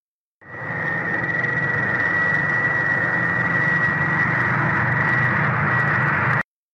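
Hard clipping turns up three times: single flattened peaks at 1.24 s and 2.34 s, then a stretch from 4.92 to 6.37 s driven about 3 dB past the ceiling. The tops get sheared flat, so you hear brief crackles, then a harsher fuzz.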